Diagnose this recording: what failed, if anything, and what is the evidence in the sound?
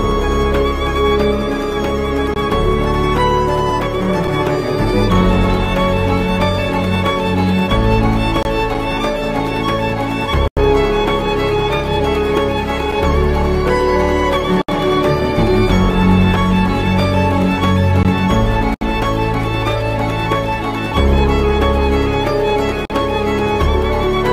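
An underrun with held sample occurs at 18.03 s, at the driver/buffer stage. The output buffer ran dry for about 17 ms, and the converter froze on its last value, flattening the waveform. Playback then resumed where it stopped, so almost nothing was lost and the recovery is soft.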